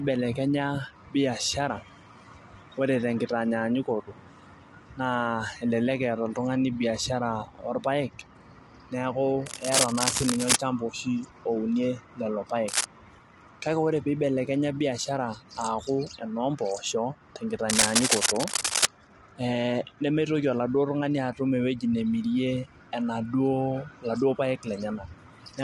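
Throughout, the speech sounds rough and grainy, with nothing above 11.6 kHz. This is likely low-delay AAC compression, which fits about 32 kbps. Scratching bursts, likely cable scratch noise from a disturbed contact, occur at 9.46 to 10.56 s and 12.68 to 12.85 s at roughly speech level, then at 17.69 to 18.86 s, slightly louder.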